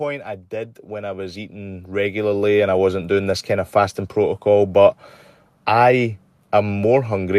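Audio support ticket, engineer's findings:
Automatic gain rising, 0.49–3.78 s, ending just before "protocol but". AGC on capture path saw a low input level and raised gain gradually by about 13 dB over roughly 3.3 s. Speech and background noise floor swell together. Waveform: envelope ramps steadily upward across the span. Spectrogram: whole-band energy, noise floor included, brightens uniformly with no spectral shape change.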